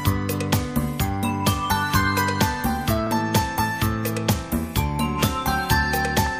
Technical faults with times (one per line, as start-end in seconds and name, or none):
1.47-6.27 clock drift buffer slips